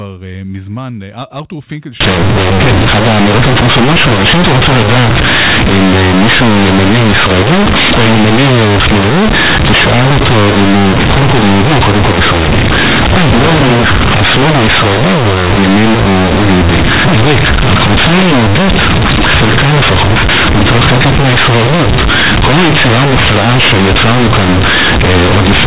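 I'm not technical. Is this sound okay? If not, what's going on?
No. From about 2.01 s to the end, this is companded audio read as linear: the speech was stored in A-law telephone coding, but it's being played back as plain 8-bit samples without being expanded. Quiet bits come out as loud as loud bits, so you get harsh, buzzy distortion and heavy noise in the pauses.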